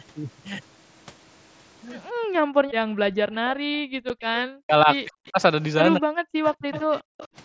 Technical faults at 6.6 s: speech suppressed in double talk

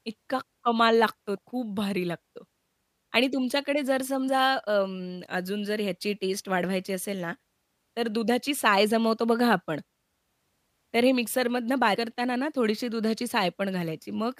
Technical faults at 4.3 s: compressed frames skipped

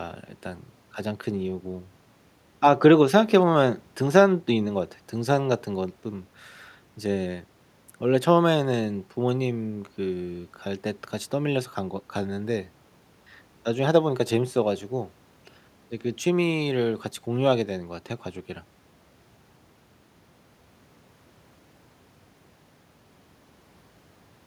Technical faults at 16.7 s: none

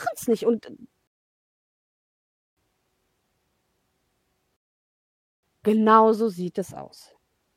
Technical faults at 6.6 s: none

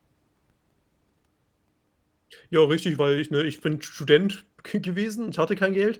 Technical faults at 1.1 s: none

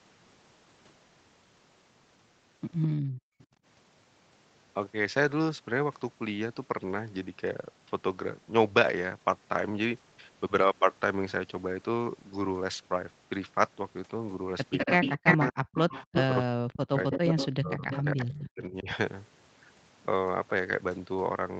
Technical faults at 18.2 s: speech suppressed in double talk; echo leak

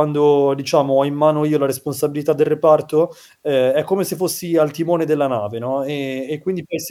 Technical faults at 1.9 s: none

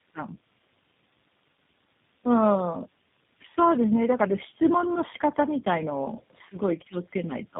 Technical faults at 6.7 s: tandem speech coding

